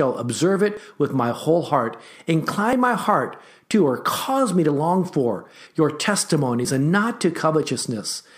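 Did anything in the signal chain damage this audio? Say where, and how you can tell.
Yes. Audio missing between chunks, likely from the driver or buffer stage. Skips of about 20 ms fall at 0.77, 1.75, 2.73, 3.71, 4.69, 5.67, 6.65 and 7.63 s. The even spacing fits 1 s chunks, each handover losing a sliver.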